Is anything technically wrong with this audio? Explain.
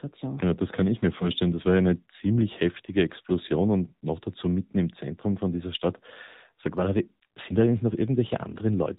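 Yes, two faults can be heard in this speech clip.

AMR narrowband mobile codec, throughout: the speech was carried over the narrowband mobile codec, sampled at 8 kHz, so nothing above 4 kHz survives. The decoder rebuilds each 20 ms frame from a vocal-tract filter excited by a handful of pulses. The damage is plainly audible: a dull, band-limited, buzzy and synthetic quality that points to a low mode around 7.4 kbps.

Lost AMR speech frames, at 1.18 to 1.30 s, just after "das kann ich mir": a speech frame failed its checksum, probably through a radio error. The decoder filled the gap by reusing the last good pitch and vocal-tract settings at reduced gain. This produces a brief dip and warble, which fits a single lost 20 ms frame, followed by a moment of rough, weakened sound as the decoder recovers.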